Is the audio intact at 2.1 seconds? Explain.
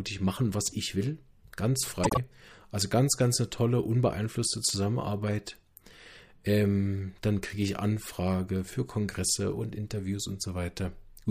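No. From 2.03 to 2.17 s the speech has frames out of order: two adjacent runs, each two frames long, were decoded swapped, so the stretch plays with its halves exchanged. It sounds like a garbled flutter. A spectrogram shows formant tracks jumping backward, then forward.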